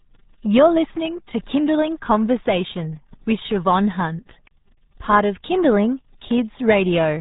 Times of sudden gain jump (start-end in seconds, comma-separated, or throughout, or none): none